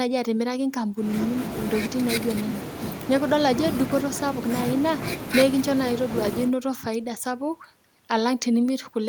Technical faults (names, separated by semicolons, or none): none